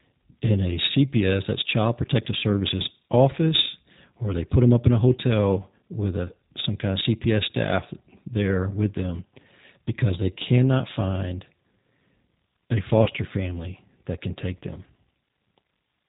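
A speech recording carried throughout by the G.729 codec, and its damage is plainly audible. The voice has the slightly rough, synthetic edge of a coder that rebuilds each 10 ms frame from a vocal tract filter, a pitch predictor and a handful of pulses, consistent with G.729A at 8 kbit/s. Nothing passes above 4 kHz, so a spectrogram shows a hard ceiling there with empty space above, and the harmonics below look slightly smeared and grainy rather than clean. At 13.04 s there is a brief dropout, which fits a single lost VoIP packet concealed by the speech codec. About 30 ms of signal is missing, and the decoder fills the gap by stretching its last pitch and filter into a buzzy tone or coloured noise that fades. Because each frame builds on the one before, the voice stays weak or distorted until about 13.10 s. On a spectrogram this appears as a short stretch of stretched-out sound dimming over time. 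On the waveform it is a run of extrapolated signal shrinking in amplitude before normal speech resumes.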